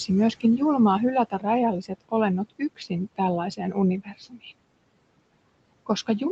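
Speech recorded in a room with steady background noise, carried over a call path whose audio stops at about 8 kHz, consistent with a wideband codec such as Opus at a moderate bitrate. Noise suppressor artifacts run through the whole clip. The suppressor pulls the room noise down by about 21 dB in the gaps, so the background sinks between phrases and swells back under the talker. The suppressor also cuts parts of the speech, treating low-level speech energy as noise and attenuating it with the background. This happens at 1.3 to 1.45 s, 1.82 to 2.13 s, 2.5 to 2.91 s and 4.04 to 4.46 s. Within these spans, short stretches totalling roughly a tenth of a second each, and nearer two tenths in the last, drop by about 17 to 20 dB, leaving soft consonants and word tails swallowed or faint.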